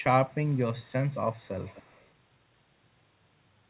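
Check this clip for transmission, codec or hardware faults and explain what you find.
One fault is present: an echo leak. At 0.00–0.04 s, 0.26–0.59 s, 0.77–0.92 s, 1.09–1.16 s and 1.32–2.09 s, a faint delayed copy of the speech trails about 227 ms behind (243 ms in the last stretch), loudest in that final stretch. The likely cause is a far-end loudspeaker whose echo canceller let residue through. The speech band stops at 4 kHz, as expected on a G.711 mu-law call path.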